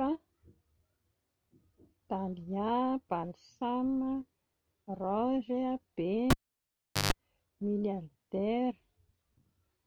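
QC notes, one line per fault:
6.30–7.13 s, cable pulled and plugged in: a pop marks the lead coming out, then the speech falls to near silence for about 0.77 s, followed by a 145 ms burst of 50 Hz mains buzz as the plug tip touches before seating, and a second pop as the sound returns. The buzz ahead of the return is what separates this from a plain dropout or a muted channel, which would cut out cleanly without the hum.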